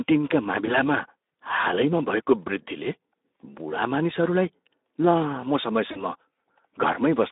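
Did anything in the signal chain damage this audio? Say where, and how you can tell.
Yes. At the codec stage, Speex encoding at a low setting, consistent with roughly 11 kbps, starved the excitation of bits. The speech sounds plainly hoarse and noisy throughout, and the band is confined to about 250 Hz to 3.7 kHz, so it has a thin, telephone-like colour.

On the network, VoIP packet loss was concealed by the speech codec at 0.65–0.77 s, at 3.40 s just before "बुढा मानिसहरूलाई लामो", and at 5.91–6.04 s just after it. The decoder extended its last pitch and filter into a fading smear, and recovery lingers after each gap.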